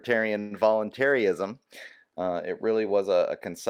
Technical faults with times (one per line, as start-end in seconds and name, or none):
0.39-0.53 call audio freeze